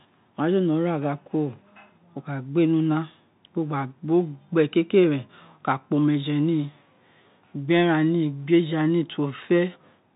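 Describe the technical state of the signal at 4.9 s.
At 4.9 s the speech is passing through a Bluetooth CVSD headset codec, as it does for the whole clip. Each sample is coded as a single up-or-down step whose size adapts, at a rate that fits a 64 kbit/s headset link. Everything above 4 kHz is gone, s sounds come out scratchy, and a grainy hiss sits beneath the voice. That granular, slope-limited roughness sets it apart from a plain low-pass filter.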